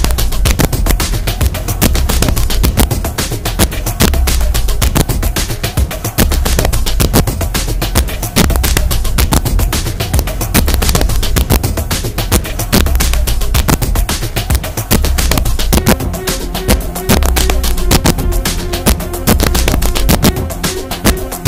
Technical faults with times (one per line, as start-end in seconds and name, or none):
0.00-21.47 integer overflow